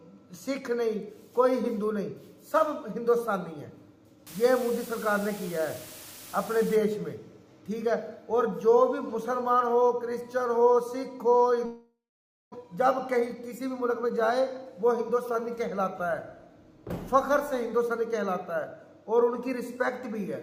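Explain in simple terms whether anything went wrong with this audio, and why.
Low bit depth with dither, from 4.27 to 6.76 s: for about two and a half seconds a steady, even hiss sits under the sound, without any crunchy distortion. The audio here is stored with only 6 bits, far too few to describe it finely. A little random noise was mixed in before rounding, so the rounding error turns into smooth, constant hiss instead of harsh grit.

Long network dropout, from 11.65 to 12.56 s: the sound suddenly smears into a buzzy, fading hiss, then goes quiet for roughly half a second before resuming. About 0.6 s of audio never plays at all. The likely cause is that the data stopped arriving over the network for a while. The player stretched the last bit it had, gave up, and went silent until new audio arrived.

Jitter buffer speed-up, from 12.63 to 15.57 s: right after the gap, the audio plays about 9 percent faster for roughly three seconds. 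It sounds slightly rushed, but the pitch doesn't rise. After the delay the player had built up extra waiting audio, and to catch up it kept snipping out tiny slices, about a third of a second in total, shortening the sound without making it higher.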